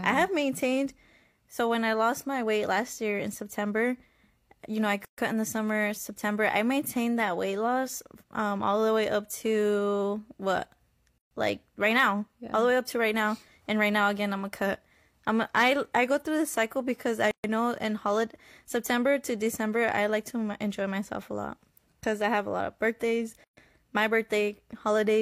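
It's a speech clip with a recurring gap at a join of encoded pieces: a gap of roughly 130 ms cuts into the talking at 5.05–5.18 s, 11.18–11.31 s, 17.31–17.44 s and 23.44–23.57 s, once every 6 s. The edges are smeared, and the speech resumes right where it stopped. That points to 6-second segments encoded separately and butted together untrimmed, leaving each encoder's start-up delay and final-frame padding in place.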